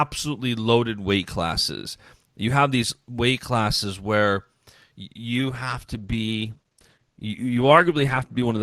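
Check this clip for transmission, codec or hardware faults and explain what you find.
One transmission fault is present, a switch to a lower-bitrate version of an adaptive stream. From 5.13 s to the end, the speech abruptly takes on more codec artefacts, with no gap or dropout at the change. The connection likely slowed, so the player dropped to a cheaper encoding. The sudden drop in quality points to a move from roughly 64 kbit/s Opus down to about 16 kbit/s.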